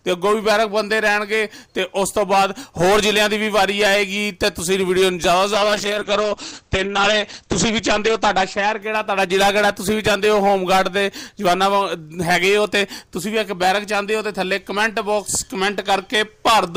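A call bitrate drop runs from 5.54 to 11.19 s. After the bandwidth estimate fell, the encoder coded more coarsely and cut the top from 20 kHz to 8 kHz. The sound turns muffled and rough, worst for 2.34 s, suggesting a fall from 64 to 9 kbps.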